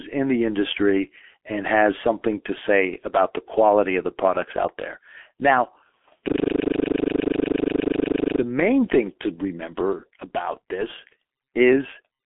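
From start to finish the speech carries G.723.1 codec damage, and it is heavy. Nothing reaches above 3.7 kHz and the lows thin out below about 250 Hz, so the sound is muffled and boxed in. Unlike a simple telephone band-limit, the voice is also hoarse and grainy, and consonants smear because the coarse 30 ms voice model, at a rate that fits 6.3 kbit/s, cannot follow fast changes.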